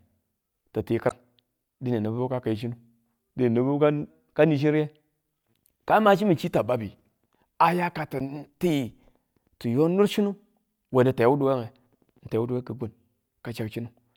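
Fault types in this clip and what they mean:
damaged data in a compressed stream: corrupted bytes make the decoder lose sync, giving short blips at 1.07 s just after "ti ti" and 8.17 s after "aya ka".
drift correction step: speech suddenly plays 6.26% slow and 112 cents flat from 2.19 to 4.1 s and 6.44 to 7.08 s, then snaps back, likely a clock-matching rate step.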